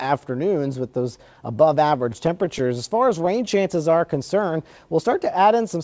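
Repeated stalls (stutter) run from 1.88 to 3.48 s. Packets kept reaching the receiver late, so the jitter buffer ran dry sixteen times across that stretch. Each time, the receiver held onto and extended the last bit of sound until fresh data arrived. The holds are brief, none longer than 17 ms, and add up to about 157 ms, roughly a tenth of the span. Nothing is dropped, but the audio catches and hiccups repeatedly.

A jitter buffer slow-down follows from 3.78 to 4.08 s. With its reserve running low, the buffer rebuilt it by repeating single pitch periods and fragments of pauses several times over, adding 36 ms. For those 0.3 s the audio plays at 91% speed without any change in pitch, so sounds stretch out slightly. The band stops at 8 kHz, which fits the G.722 call codec it passed through.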